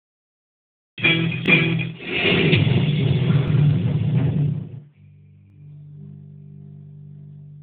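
A short stutter at 1.46 to 1.48 s and again at 3.48 to 3.50 s marks overlapping chunks, with 20 ms repeated at each 2-second join. From 4.41 to 5.16 s, a fast ticking zipper noise rides on the sound as the level drops by about 25 dB in coarse, unsmoothed steps, around 300 per second. The same 20 ms overlapping-chunk stutter returns at 5.50 to 5.52 s.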